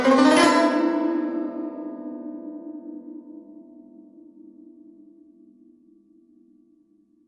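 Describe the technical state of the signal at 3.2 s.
At 3.2 s the music carries MP3 compression damage that runs through the whole clip. The treble stops dead at 11.5 kHz, and weak frequency lines flicker in and out between frames, giving a watery, swirling sheen, metallic chirps on bright sounds and smeared attacks. The damage is plainly audible and fits a starved bitrate near 48 kbps, likely from an MP3 encoder. A spectrogram shows a flat ceiling at 11.5 kHz and speckled, patchy gaps beneath it.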